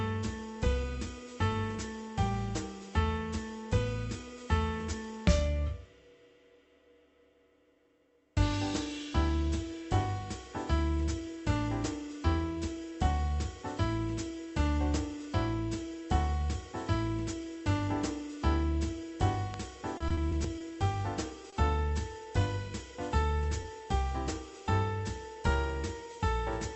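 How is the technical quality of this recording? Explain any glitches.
The recording has four audible glitches in the span from 19.5 to 23.7 s: one loud pop, a burst of repeated packet loss, and two short concealed losses. The call-path band limit is also audible. The top end stops at about 8 kHz, and the coding noise is consistent with Opus at around 32 kbps.

At 19.54 to 19.56 s there is a loud pop, a single sharp transient peaking roughly ten decibels above the surrounding sound, which continues underneath it. The likely cause is an electrical step or pulse, such as a switch, static discharge or driver glitch, entering the chain and being shaped by the downstream circuitry into a brief click-thump.

From 19.97 to 20.62 s there is repeated packet loss with a robotic sound. Audio went missing six times in quick succession, each gap no longer than 30 ms and about 80 ms in total. The receiver bridged every hole by extending the preceding sound, synthesising roughly 130 ms, about a fifth of the span. 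The stacked patches give a choppy texture with fragments dropped.

At 21.50 to 21.54 s and again at 23.62 to 23.66 s there is short concealed packet loss. Each time about 20 ms of audio failed to arrive in time, and the decoder filled the gap by continuing the prior signal's pitch or noise shape before crossfading back. Each event is heard as a brief smear or wobble, and a short transient falling in the gap can disappear.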